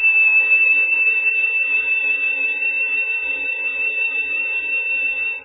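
Throughout the music, nothing sounds above 3.8 kHz, and what remains warbles and swirls as weak frequency lines flicker on and off, which points to heavy MP3 compression, likely at a starved bitrate near 8 kbps. A plain low-pass filter would dull the treble without this watery churning.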